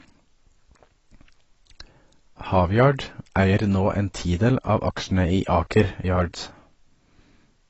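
Throughout, the speech is dull and smeared, with nothing above 8 kHz and a warbling texture that a plain low-pass filter wouldn't add. This is likely AAC compression at around 24 kbps.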